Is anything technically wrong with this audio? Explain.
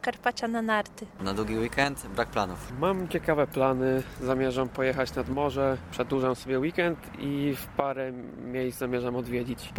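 No, nothing technically wrong can be heard anywhere in this audio.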